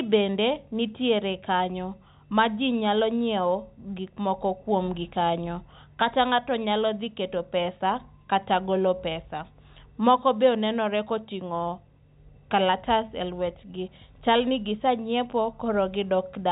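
No technical faults are audible.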